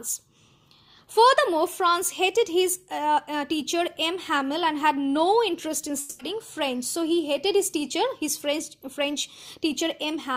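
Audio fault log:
5.99–6.21 s, long network dropout: the sound breaks into a smeared, buzzy continuation of whatever came just before it, fading as it goes, and never drops to true silence before normal audio picks up again. That points to a likely stretch where nothing reached the receiver, which papered over the hole by stretching out the last good sound. About 0.2 s of the original is simply gone, so things resume a little further on than where they broke off.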